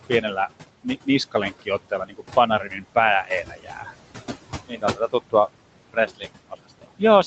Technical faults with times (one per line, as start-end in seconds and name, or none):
0.00-7.27 noise suppressor artifacts
0.09-0.48 speech cut by the noise suppressor
1.31-2.96 speech cut by the noise suppressor
3.25-3.94 speech cut by the noise suppressor
4.67-5.14 speech cut by the noise suppressor
5.89-7.02 speech cut by the noise suppressor